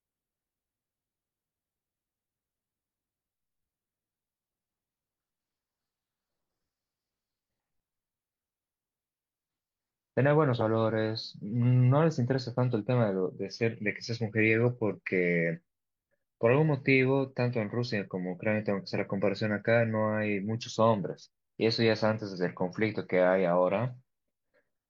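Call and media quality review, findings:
No faults found in the speech recording. Nothing to flag for follow-up.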